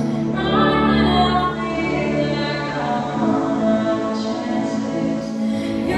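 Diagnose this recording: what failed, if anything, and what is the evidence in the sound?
At 1.32 s the audio softens over about half a second, drops about 3 dB and picks up a hiss roughly 25 dB under the signal. It stays that way until 5.65 s, when it returns to the digital sound. This is digital radio blending to analogue in the receiver. A hybrid set lost its digital stream and cross-faded over 468 ms to the FM broadcast of the same station, then back again.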